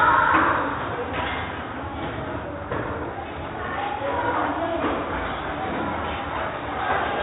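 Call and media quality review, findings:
Dull, band-limited everyday sound with gurgling, granular distortion across the whole clip. Likely MP2 compression: upper sub-bands starved of bits and switched off or flickering, the remaining bands coarsely quantised. Damage level fits a 64 kbps encode.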